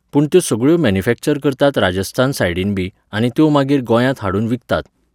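No technical faults can be heard anywhere in this speech recording. Nothing in the signal path draws attention to itself at any moment.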